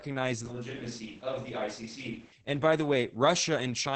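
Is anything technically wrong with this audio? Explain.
Yes, there are two faults: heavy codec damage throughout, and a section that sounds as if it was picked up from farther away.

Opus voice compression runs through the whole clip. The speech is held to a wideband ceiling near 8 kHz, so sibilants and air above that are gone. At this rate the SILK linear-prediction coder describes the vocal excitation only coarsely, leaving the voice muffled, hoarse and faintly robotic. The heavy damage fits a bitrate around 10 kbps.

A switch to a distant microphone occurs from 0.46 s to 2.32 s. The sound abruptly turns roomy and hollow and loses low end, and it returns just as suddenly at the end of that span. The level drops by roughly 5 dB, and room noise rises to around 25 dB below the speech. The likely cause is that the close microphone dropped out and a farther pickup, such as a camera microphone, took over.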